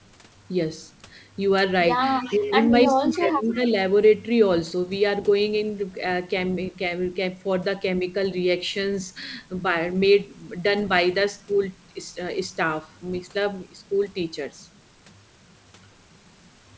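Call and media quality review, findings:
Echo leak: faint delayed copy of the talker at 2.22–2.51 s and 3.13–3.72 s, trailing by 312 ms, about 20 dB then about 25 dB under the speech. Likely the far end's echo canceller letting loudspeaker pickup through and sending it back.

Speech suppressed in double talk: talker dips while the far side's audio plays on the loudspeaker. It drops around 10 dB at 2.29–2.51 s and around 15 dB across 2.87–3.74 s, with roughly half a second chewed. The likely cause is the canceller ducking near-end speech along with the echo. Band tops out at 8 kHz, consistent with G.722.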